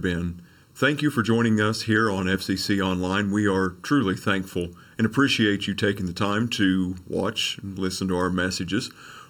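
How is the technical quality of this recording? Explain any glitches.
The recording has one fault, present from start to finish: channel delay (comb filtering). One channel arrives roughly 0.7 ms late, and the two are summed to mono, cancelling shared content at fixed notches starting near 700 Hz. The speech sounds hollow and phasey throughout.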